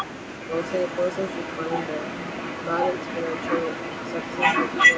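From 0.0 to 0.05 s a brief echo leak is heard: a delayed copy of the speech, about as loud as the direct sound. The far end's echo canceller likely let its loudspeaker pickup back into the line, 1.06 s late.

Between 0.34 and 0.53 s the speech is suppressed in double talk, dipping by roughly 20 dB for about a fifth of a second. The canceller likely mistook overlapping talk for echo and turned it down.

From 0.51 s to the end at 4.97 s the echo leak returns and persists. The same 1.06 s delayed copy trails about 10 dB below the speech. The fixed lag distinguishes it from room reverberation. With nothing above 8 kHz, the echo sounds band-limited like the rest.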